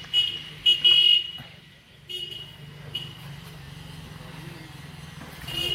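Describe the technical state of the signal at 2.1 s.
Nothing is wrong with the signal at 2.1 s; the audio is intact at that moment.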